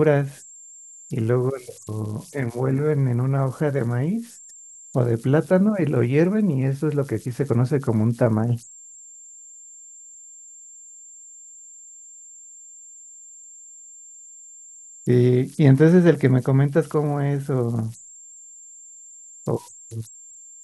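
Speech runs through the whole clip with converter idle tones audible from start to finish. A high whistle sits somewhere around 7 kHz in the pauses between phrases, and under the speech the same mechanism leaves a grainy, hissing texture. The error sits about 25 dB below the signal. It comes from a delta-sigma converter running without dither: at low input levels its modulator settles into repeating bit patterns, and those cycles produce tones whose pitch follows the small DC offset at the input.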